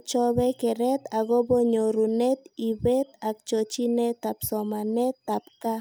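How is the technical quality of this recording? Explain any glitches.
No technical faults are audible.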